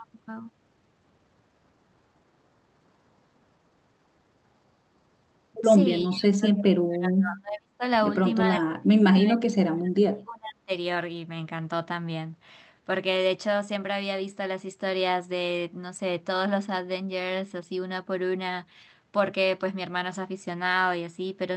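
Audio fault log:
throughout: sample clock jitter. A timing wobble of around 1.5 microseconds blurs each sample, leaving a rough hiss roughly 40 dB under the speech that swells on loud, bright syllables. On a spectrogram it shows as a faint broadband haze that follows the energy and vanishes in pauses.
6.07–7.83 s and 8.45–10.7 s: speech suppressed in double talk. The speech sinks by up to about 35 dB, likely because an echo canceller mistook both talkers for echo. The waveform shows the envelope dropping.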